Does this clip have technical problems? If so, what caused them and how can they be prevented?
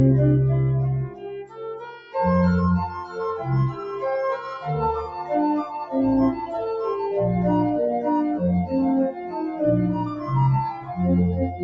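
Yes. A noise suppressor built for speech was applied to this music or sound throughout. It treats steady tones, ambience and reverb as noise and pulls them down, while attacks pass. The level therefore swings by around 10 dB. Held sounds sink and tails get clipped, so the audio pumps and thins. To prevent this, turn the noise suppressor off or switch the call to a music mode before sending this kind of audio.

Seven sounds were cut by the noise suppressor. The worst is from 1.03 to 2.15 s, with a drop of about 15 dB over roughly a second. Shorter dips follow at 3.04 to 3.2 s (about 8 dB), 3.72 to 4.03 s (about 9 dB), 5.02 to 5.25 s (about 6 dB), 9.13 to 9.35 s (about 7 dB), 10.1 to 10.29 s (about 5 dB) and 10.73 to 10.94 s (about 8 dB). In each, the sound was judged to be noise and ducked. Disabling speech noise suppression for music prevents these dips.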